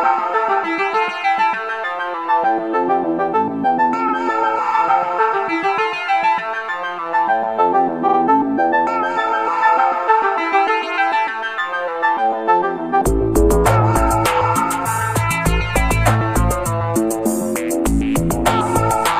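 At 4.04 s a 46.4 ms block of audio plays twice, and at 8.04 s a block of the same length plays three times, lasting until 8.14 s. These are repeated frames: a compressed frame, judging by the block length, was delivered again, so the decoder replayed it. Each repeat is heard as a short stutter. A spectrogram shows identical adjacent slices, and the audio runs 46.4 ms and 92.9 ms longer.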